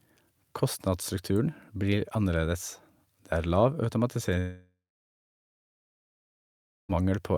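Speech clip with a long network dropout from 4.39 to 6.97 s. About 2.5 s is lost. A brief fading buzz gives way to roughly 2.1 s of silence, likely from packets never arriving.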